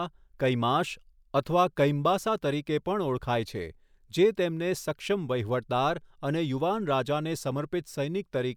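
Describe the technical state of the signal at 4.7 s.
At 4.7 s the speech signal is intact, with no audible fault at that moment.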